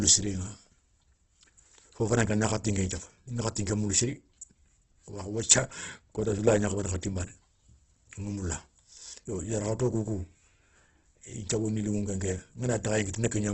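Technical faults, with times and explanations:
Throughout: Opus compression, likely. Nothing is heard above 8.1 kHz. The speech sounds grainy, rough and noisy, not swirly. Band energies are kept, but starved bands are filled with folded or noise content. The heavy damage fits about 12 kbps.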